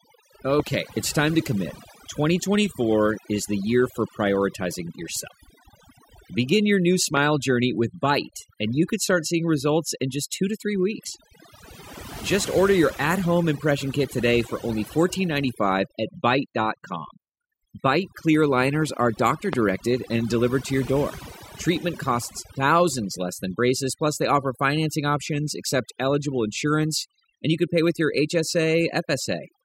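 Overdone noise removal runs through the whole recording. A noise reduction stage set far too aggressively has cut individual frequency bands whenever they came close to its noise estimate, taking the quiet edges of the speech with them. The pauses fall to near silence sprinkled with twinkling specks. Unlike the smearing of a low-bitrate codec, the damage follows the noise floor and is worst in the quietest parts.

The first loud pop comes at 0.60 to 0.69 s, just before "it's time to commit." It is a quick double pop, sitting roughly 15 dB above the speech. Single pops follow at 7.17 to 7.19 s, between "your new" and "journey with," and at 19.53 to 19.55 s, between "clear liners are doctor" and "and delivered to your." The likely cause is an electrical step or pulse, such as a connector, switch or static discharge, being added to the signal. These are sharp thumps laid on top of the speech, which continues underneath without a gap. 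That sets them apart from dropouts or clipping, which damage the speech itself.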